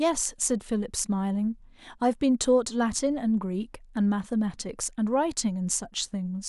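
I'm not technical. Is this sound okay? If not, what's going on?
Yes, no faults are audible.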